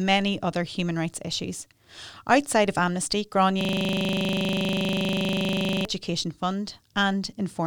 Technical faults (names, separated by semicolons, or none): system hang loop